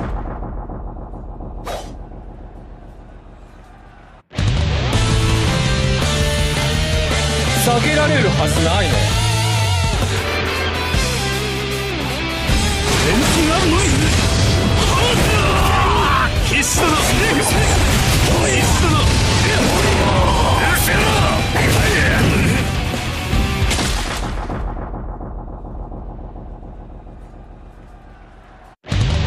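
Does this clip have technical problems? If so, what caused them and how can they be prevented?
No, no technical problems can be heard anywhere in this clip. There is nothing to trace to a cause and nothing that needs preventing.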